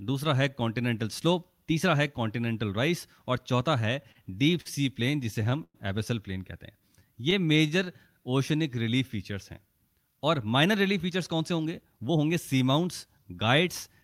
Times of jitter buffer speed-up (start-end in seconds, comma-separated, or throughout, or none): 10.66-14.03